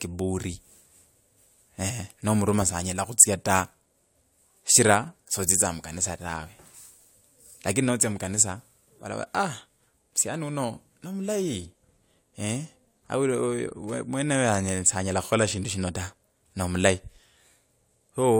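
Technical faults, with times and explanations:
Nothing in this speech recording stood out as a technical problem on listening.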